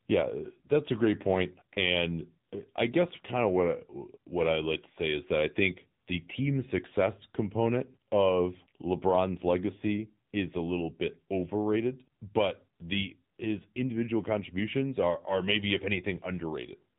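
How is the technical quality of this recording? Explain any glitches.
The recording is limited by mobile-phone coding. Throughout, AMR narrowband mobile codec processing cuts everything above 3.8 kHz and makes the speech plainly buzzy and synthetic, consistent with a low rate near 8 kbps. Unlike a simple low-pass filter, the codec also makes voiced sounds buzzy.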